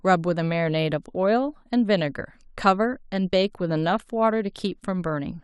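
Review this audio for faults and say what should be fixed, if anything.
No faults turn up in the audio, so nothing needs to be fixed.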